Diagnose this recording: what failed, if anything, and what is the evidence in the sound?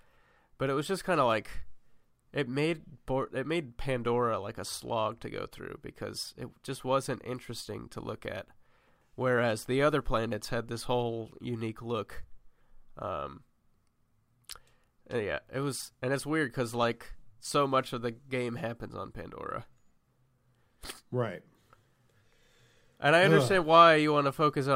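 Nothing failed in this recording, and the sound offers no evidence of a fault at any stage.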